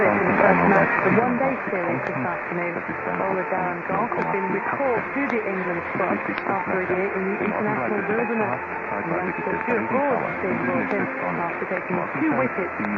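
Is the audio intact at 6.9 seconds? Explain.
No. At 6.9 seconds the audio sits inside a sudden gain jump that begins at 1.20 s and holds to the end of the clip. The level dropped by about 6 dB from one sample to the next, likely a gain setting or bit shift applied without any ramp. So at 6.9 s the sound and its background noise are both quieter together, about half the earlier amplitude, rather than fading down smoothly.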